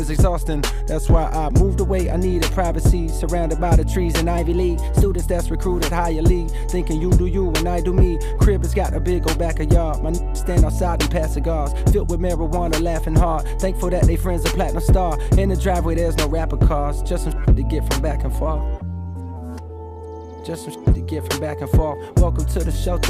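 From 0.46 to 1.61 s the sound slows by 6.35% and drops 114 cents, then at 4.38–5.20 s and 18.46–19.37 s it speeds up 6.35% and rises 107 cents. This is likely a drift correction step, not wow, which wobbles continuously.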